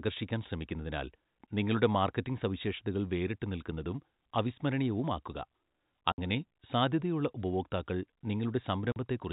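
At 6.12–6.18 s, just before "സാധ്യതയുള്ള ഉപഭോക്താക്കൾ", and 8.92–8.96 s, packet loss filled with silence leaves hard-edged holes of 60 and 40 ms, fitting 20 ms packets, with no smoothed concealment.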